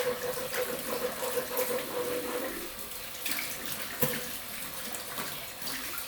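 No technical faults can be heard anywhere in this recording of sounds. Nothing in it points to a problem in how the audio was captured, processed or delivered.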